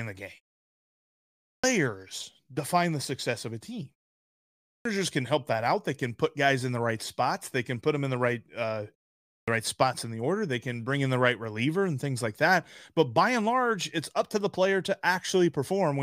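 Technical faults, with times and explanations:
1.42–1.64 s, 4.64–4.85 s and 9.25–9.48 s, clipped start after a pause: each time the speech resumes after a gap, roughly the first 0.21 to 0.23 s gets swallowed, so it starts abruptly without its opening sounds. That's before "can help that out" and after "in the right uh" going into "right spots in the". It happens even after the shortest gap (0.38 s), so the output device seems to drop into a sleep state almost immediately and needs a fixed wake-up time before sound gets through again.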